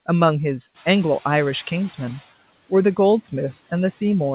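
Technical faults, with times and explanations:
0.74–2.27 s, noise suppressor catching up: the room noise jumps by about 11 dB just before this, and the suppressor's noise estimate lags behind it, so the noise first comes through with less reduction. Over roughly 1.5 s it sinks by about 12 dB as the estimate adapts. On a spectrogram, the broadband floor below the 4 kHz ceiling of the G.711 call path fades from bright to dim. The waveform's baseline between syllables shrinks over the same stretch.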